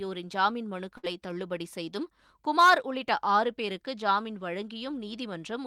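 A speech recording with a burst of packet loss from 0.97 to 1.05 s: consecutive packets never arrived in time, so the receiver stretched the last sound for about 58 ms, fading it into a held buzz or hiss, then resumed roughly 60 ms later, skipping that stretch of speech entirely.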